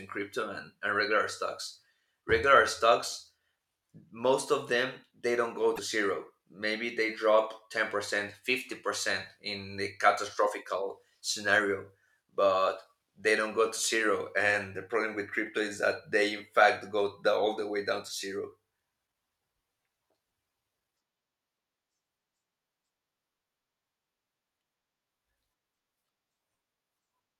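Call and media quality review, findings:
Speech, 5.75–5.79 s, right after "them they don't go": 40 ms glitch, audio skips ahead. Likely broken MP3 bit reservoir in the decoder path. Frames dropped, so the next frames pull reservoir bytes from the wrong frame, consistent with 24 ms frames. Spectrogram: brief broadband smear or vertical stripe; waveform: discontinuity at the jump.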